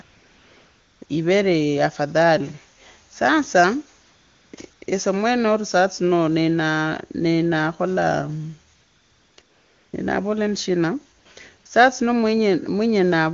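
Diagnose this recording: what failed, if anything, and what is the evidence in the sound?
Call processing failed through AMR comfort noise: nine pauses between 0.01 and 11.65 s, lasting 20 ms to 1 s, lose the real background to a smooth, steady synthetic hiss. Unlike a noise gate's true silence or a packet dropout, the floor never vanishes; its texture switches instead.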